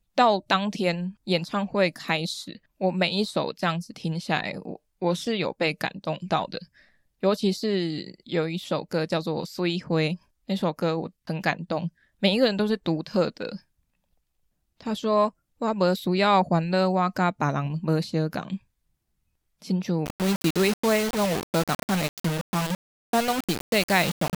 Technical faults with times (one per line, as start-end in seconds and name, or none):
20.06-24.37 low bit depth without dither